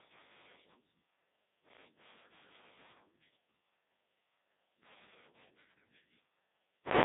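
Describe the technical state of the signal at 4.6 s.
At 4.6 s the speech is still passing through the Codec 2 vocoder that colours the whole clip. The decoder rebuilds the voice as a sum of sine waves from sent pitch, voicing and envelope values rather than the waveform, which fits a very low-rate mode around 1.2 kbit/s. The result is heavily damaged, robotic and buzzy, confined to roughly 150 Hz to 3.7 kHz, with nothing above 3.8 kHz.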